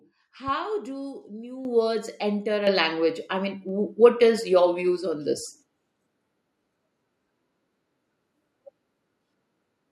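At 1.65 s the level jumps by about 9 dB. At 2.67 s it jumps again, by about 6 dB. This is a microphone volume stepped up. The call software raised the input gain in single steps. Speech and background noise get louder together.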